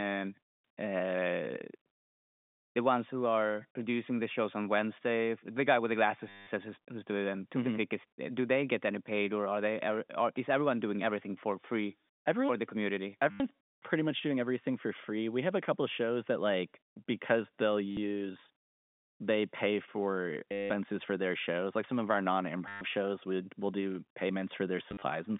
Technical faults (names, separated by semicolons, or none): packet loss with last packet repeated